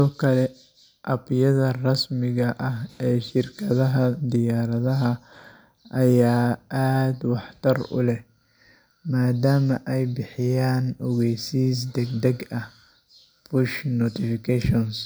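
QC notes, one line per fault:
No fault to note.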